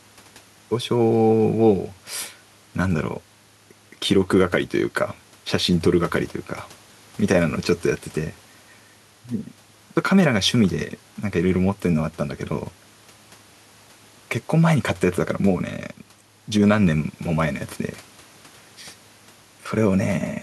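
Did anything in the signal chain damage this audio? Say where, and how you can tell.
No, nothing I can hear points to any stage of the chain having damaged this one, so there's no problem to chase down here.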